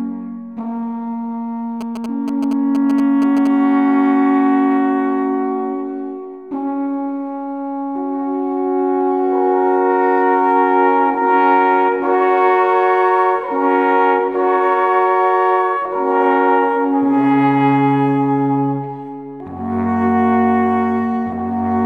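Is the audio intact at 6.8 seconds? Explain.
Yes, the audio is intact at 6.8 seconds, with no dropout, click, distortion or other fault at that moment.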